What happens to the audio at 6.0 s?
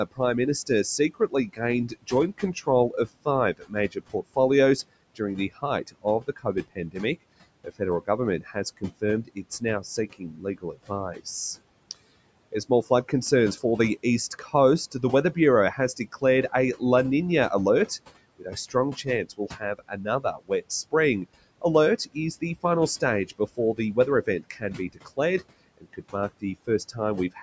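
At 6.0 s the noise suppressor is cutting speech. The span runs from 5.15 to 6.96 s. The suppressor misjudges parts of the speech as steady noise and turns them down with the background. The deepest drop is about 20 dB. In total about half a second of speech is hit. Soft consonants and word endings sound swallowed or faint.

The same moment also carries general noise suppressor artifacts, present across the whole clip. The suppressor pulls noise bands down by about 21 dB, frame by frame. The background sinks in pauses and comes back under the speech. The room noise behind it sits about 19 dB under the speech.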